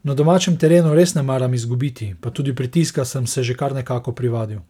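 Nothing in this bit of speech trips the ear, with no dropouts, glitches or other technical faults turning up anywhere along the way.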